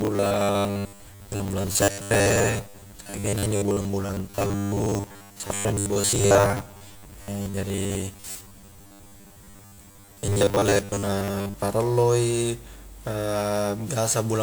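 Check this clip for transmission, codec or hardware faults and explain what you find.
Two faults are present.

Robotic sound from repeated short buffers, 0.01 to 11.54 s: a 10 ms block likely loops while roughly two-thirds of the incoming audio is skipped, producing a rigid metallic 100 Hz buzz.

Generation loss, throughout: about ten lossy WMA re-encodes, likely near 128 kbit/s, accumulate smearing, swirly hollowness and blurred attacks.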